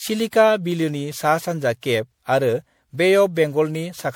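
Speech with generation loss running through the whole clip: swirly, smeared and hollow, with consonant onsets blurred. This is more damage than a single 96 kbit/s MP3 pass would leave, so it likely comes from around seven repeated re-encodes, each adding fresh artefacts.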